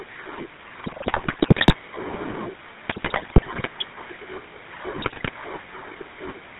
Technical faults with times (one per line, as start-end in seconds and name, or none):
0.00-6.59 GSM full-rate codec
0.84-1.75 GSM bit errors
2.88-3.69 GSM bit errors
4.98-5.30 GSM bit errors